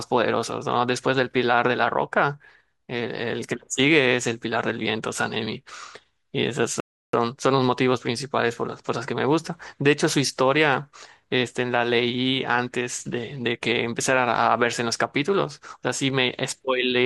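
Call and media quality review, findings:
Playback stall, 6.80–7.13 s. Speech drops to silence for 333 ms, then resumes. Player likely starved of buffered data, or its output thread was blocked.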